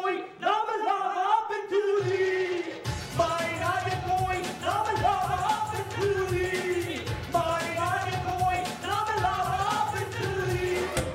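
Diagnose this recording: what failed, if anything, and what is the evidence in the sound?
Nothing in the chain failed.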